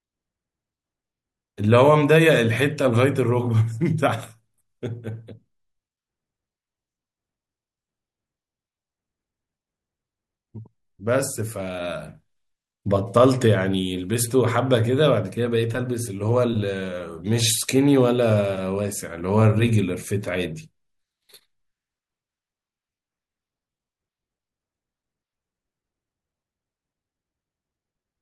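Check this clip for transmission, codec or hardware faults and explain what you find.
No transmission, codec or hardware faults.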